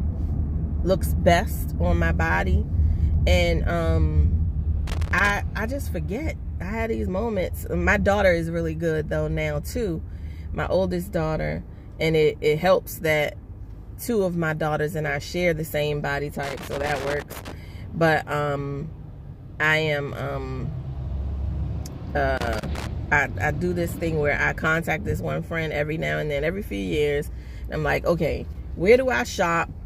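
Loose connector crackle bursts at 4.87–5.30 s, 16.43–17.52 s and 22.37–22.87 s: an intermittent contact chops the signal, producing irregular scratchy crackle.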